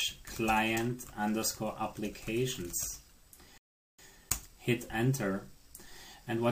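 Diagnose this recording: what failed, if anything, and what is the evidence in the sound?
Playback failed with a rebuffering stall: at 3.58 s the audio drops to silence and resumes at 3.99 s exactly where it left off, adding about 0.41 s. The waveform shows a flat gap, the spectrogram a blank vertical band, because the player ran out of downloaded audio and waited.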